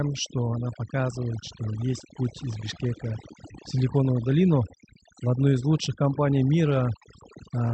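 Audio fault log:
Throughout: overdone noise removal. Bands near the noise floor are gated away, leaving near-silent gaps with twinkling specks and a spectrogram of scattered isolated dots.
Throughout: clock drift between sender and receiver. The sender's clock runs roughly 3% slow, so the jitter buffer keeps draining, forcing small recurring timing repairs visible as irregular waveform seams.
0.28–7.63 s: repeated timing corrections. Short segments are repeated unevenly, stretching playback to 98% speed and adding about a fifth of a second, leaving duplicated waveform slices.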